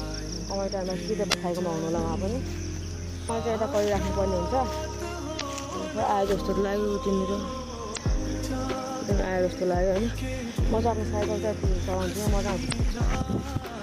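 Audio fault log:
1.30–1.34, 3.26–3.30, 5.37–5.42, 7.93–7.98 and 12.69–12.73 s: damaged data in a compressed stream. These are brief blips where corrupted frames knock the decoder out of sync until it catches the next frame header.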